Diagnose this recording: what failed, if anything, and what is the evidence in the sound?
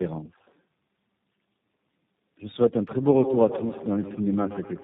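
Codec stage: tandem speech coding re-encoded the speech through three speech coders, each compounding earlier damage, leaving it rough, warbly and muffled throughout, nothing above 3.8 kHz.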